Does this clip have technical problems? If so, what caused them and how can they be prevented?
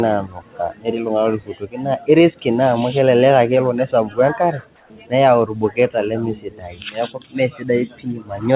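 Yes. From 4.76 to 4.9 s, just before "niyau irbuketa lemesidai", the real background in the pause, sitting about 35 dB below the loud parts, gives way to a flat, featureless hiss about 2 dB quieter. This is likely comfort noise in place of the background: the sender's voice detector judged the gap silent and stopped transmitting, and the receiver filled those 140 ms with synthetic noise. Disabling discontinuous transmission on the call keeps the real background intact.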